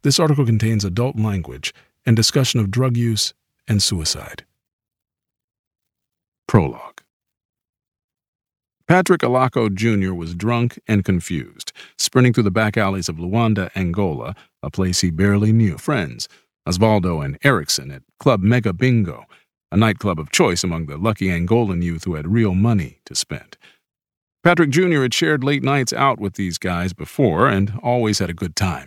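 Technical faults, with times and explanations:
15.77 s, stream segment skipped. The speech jumps abruptly ahead here, with a short blip at the join. Part of the recording is gone, not silenced. The likely cause is a stream segment that failed to load, so playback resumed with the next one.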